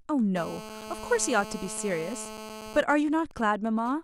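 From 0.36 to 2.81 s a hard, raspy 217 Hz buzz sits about 13 dB below the speech: GSM phone buzz, a nearby 2G phone in a call whose radio bursts the audio circuit rectifies. From 2.83 to 3.92 s a quieter pattern of even ticks with a longer 217 Hz buzz twice a second takes over, roughly 20 dB down. These are GSM signalling bursts, sparse transmissions from a nearby 2G phone while its user is silent in the call.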